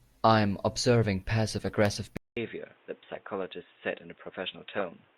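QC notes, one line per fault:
2.17 s to end: input switched to a poorer device. The system likely moved to a narrower-band microphone or headset profile. After a 0.2 s silence the speech loses everything above 3.8 kHz, turning dull and boxy, drops a few dB, and gains faint new background noise.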